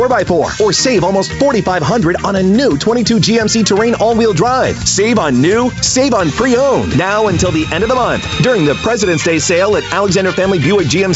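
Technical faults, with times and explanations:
Throughout, gain pumping. The gain swings roughly 5 dB. Loud and soft parts sit close in level, so the sound feels squashed. The likely cause is excessive mic gain reined in by a fast limiter.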